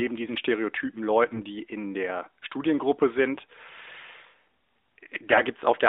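AMR bit errors strike from 5.30 to 5.41 s, near the end of the speech. Over that stretch, about six 20 ms frames, which fits a weak radio link, the less protected bits of each frame arrived flipped at a rate of roughly a few percent, while the check on the core bits still passed. The excitation pulses land in the wrong spots and the finer pitch, gain and spectral values drift, so the speech keeps its rough pitch and level but turns hoarse, scratchy and gargly, against the narrowband mobile-codec sound of the rest.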